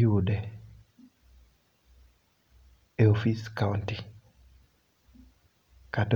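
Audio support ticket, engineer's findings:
Listened to the speech clip end to end and found nothing to flag, so no action needed on this one.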